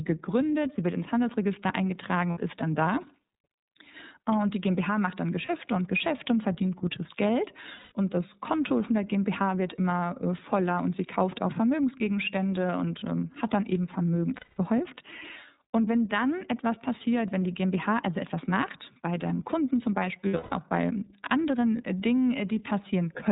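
Throughout, the speech passes through the iLBC codec, which fits its 13.33 kbps mode with 30 ms frames. Everything above 4 kHz is cut off, so the speech sounds narrowband and plainly rough and synthetic, and each frame's excitation is coded independently of the previous one.

Lost iLBC frames then cause five dropouts. The decoder covers each one by repeating the last pitch cycle mixed with noise. The gaps come at 2.31 s (60 ms), 5.46 s (30 ms), 7.76 s (150 ms), 14.36 s (210 ms), and 20.28 s, where 210 ms of losses are spread over 240 ms with a longest run of roughly 150 ms. Each gap sounds like a held, slightly buzzy or breathy vowel that fades during the longer losses, and clear speech returns almost immediately afterward.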